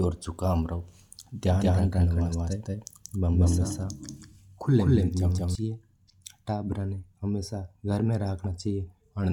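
From 1.49 s to 5.55 s the speech is heard twice: a second, equally loud copy trails by roughly a fifth of a second, dry and full-band, switching on and off abruptly. This doubled audio track most likely comes from a slower second capture path mixing in.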